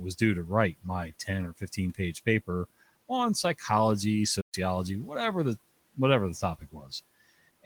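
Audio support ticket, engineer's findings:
Playback stall, 4.41 s to 4.55 s. Likely buffer underrun or a blocked player thread starving the output. Audio drops to silence for about 120 ms after "page paper on psychology", then resumes with "whatever the whatever the". Audible gap breaks the phrase flow.

Speech cut by the noise suppressor, 6.59 s to 6.92 s, right after "whatever the whatever the". Suppressor misclassifies quiet speech as noise and applies gain reduction, peaking at about 11 dB. Roughly a fifth of a second of speech sounds swallowed and faint, while room noise sits about 27 dB under the speech.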